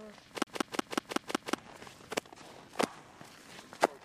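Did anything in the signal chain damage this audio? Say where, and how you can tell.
Yes. From 0.44 to 1.55 s the sound stutters in a fast, even loop, the same 186 ms slice playing six times with a brief mute at each jump. That is a CD stuck on one turn at playback: a scratch keeps throwing the laser back one track.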